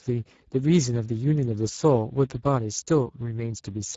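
Speex codec damage runs through the whole speech clip. This CELP coder has too few bits to describe the excitation, so the voice comes out plainly hoarse and noisy, which fits a low setting near 10 kbps, and nothing remains above 7.7 kHz.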